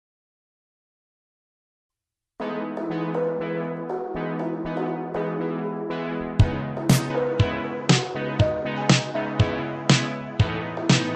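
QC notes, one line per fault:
7.10–11.15 s, likely an input switched to a poorer device: nothing passes above 8 kHz from 7.10 s, and a faint new background noise arrives with no gap and little level change. That fresh noise floor, beyond lost treble, separates a different microphone from simple filtering.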